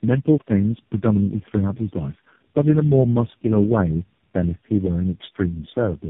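Tandem speech coding runs the whole way through: the speech sounds rough, muffled and warbly, as if four low-rate codecs were stacked back to back, with nothing above 3.6 kHz.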